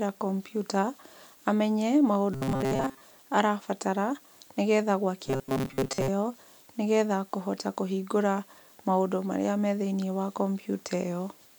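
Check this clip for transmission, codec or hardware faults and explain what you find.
Two bursts of robotic sound from repeated short buffers, at 2.34 to 3.01 s and 5.27 to 6.08 s, turn the speech into a rigid metallic buzz at 133 Hz. This is likely from roughly 7.5 ms of audio being replayed in place of most of the real signal.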